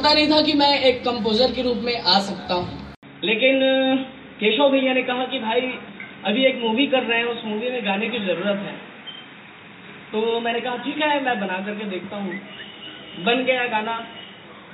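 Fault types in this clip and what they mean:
Input switched to a poorer device: at 2.95 s an 80 ms silence gives way to duller, boxier sound with nothing above 3.8 kHz. It is a little quieter and carries a faint new noise floor, likely because recording moved to a narrower-band microphone or headset profile.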